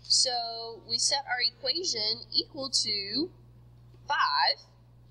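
No faults are audible anywhere in the recording.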